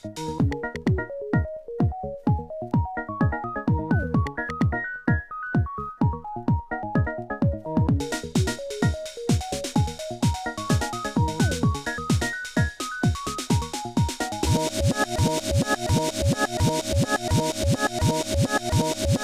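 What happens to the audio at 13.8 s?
Nothing goes wrong at 13.8 s; the audio plays through that moment intact, with no dropout, click, glitch or other fault.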